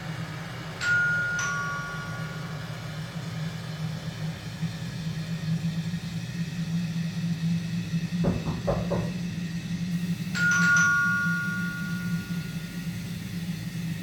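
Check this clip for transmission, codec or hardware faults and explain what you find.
One fault stands out, in the final stretch from 9.92 s to the end at 14.03 s: low bit depth without dither. The grainy distortion fits about 6 bits, likely from rounding without dither, so the rounding error sits only about 25 dB below the sound. That error follows the signal, making quiet passages gritty. Dither would instead leave a steady hiss independent of the sound, with no grain that rises and falls with it.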